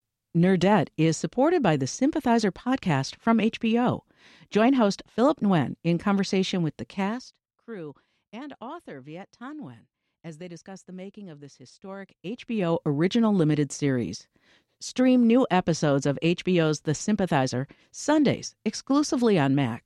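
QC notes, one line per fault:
No faults heard.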